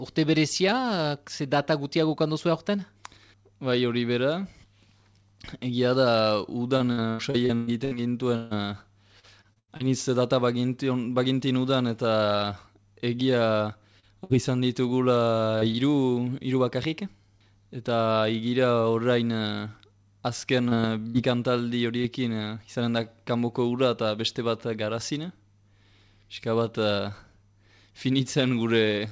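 From 6.77 to 9.83 s the audio turns choppy: repeated packet loss (robotic sound). Thirteen gaps, the longest 145 ms, leave about a quarter of the span as receiver-filled continuation of the previous sound rather than real signal. The same effect recurs more lightly from 20.69 to 22.07 s, with four gaps of up to 67 ms.

Short concealed packet loss occurs at 14.00–14.06, 15.59–15.65 and 15.71–15.77 s. Each hole is 30 ms. The decoder bridges it by extending the last sound and then blends back, which is heard as a brief smear or wobble.

Between these, at 14.24–14.33 s, a burst of packet loss drops 60 ms. The concealment holds and fades the preceding sound before playback resumes further on, so the material in that gap is missing. Throughout, the audio has no content above 8 kHz, which fits a G.722 call codec.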